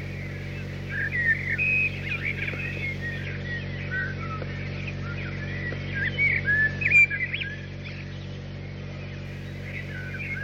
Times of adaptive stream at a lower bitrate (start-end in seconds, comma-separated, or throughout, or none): 3.25-9.25